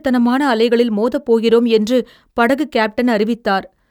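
Speech recording with no technical faults detected anywhere in the clip.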